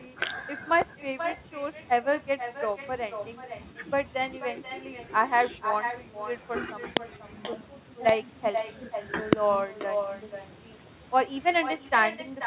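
With no echo canceller on the far end, its microphone picks up the loudspeaker, so throughout the speech a thinner copy trails about half a second behind, about 8 dB quieter. At 6.97 to 6.99 s and again at 9.33 to 9.35 s, a loud pop sits well above the speech, which continues underneath. A likely cause is an electrical transient such as static or a switching glitch. Both the speech and its echo stop at 4 kHz, which fits a narrowband G.711 call path.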